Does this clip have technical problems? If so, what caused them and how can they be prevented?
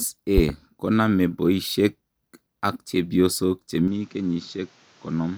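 Yes. A loud pop at 0.38 to 0.52 s: two sharp pops in quick succession, far louder than the speech, which carries on beneath them. They are likely a voltage pulse from a plug, switch, static discharge or driver glitch. Secure connections, avoid touching switches or cables while recording, and ground the setup against static.

An input switched to a poorer device at 3.88 s: without any gap, the sound turns duller, with nothing above 7.6 kHz, drops a few decibels in level, and gains a new hiss well below the speech. The likely cause is the system changing to another microphone or a headset call profile. Lock the recording input in the system settings.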